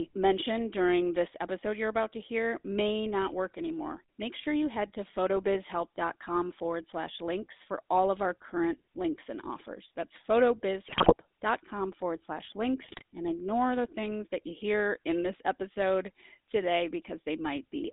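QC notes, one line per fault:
Throughout: GSM full-rate codec. The speech carries a buzzy, gravelly roughness because the vocal-tract filter is driven by a coarse, thinned-out pulse excitation, which fits a 13 kbps full-rate channel. The line band runs from only 250 Hz to 3.7 kHz, so the sound is thin and muffled.
10.86–11.14 s and 12.80–13.02 s: GSM bit errors. Both bursts break into squawks, pops and gargling, the first more violently. Corrupted filter, pitch and gain values warp the spectrum and jolt the level frame by frame, which points to a weak, error-prone radio link.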